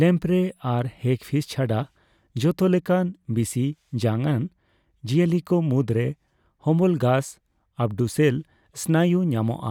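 No technical faults detected anywhere in the speech recording.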